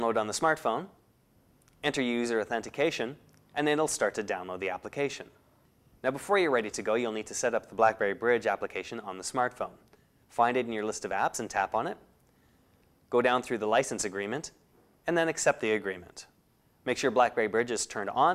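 Nothing stood out as wrong on listening through the audio.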